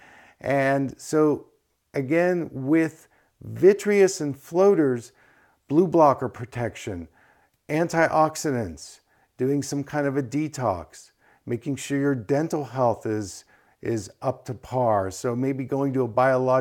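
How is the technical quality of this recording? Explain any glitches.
The technical quality of the recording holds up, with no glitches to explain.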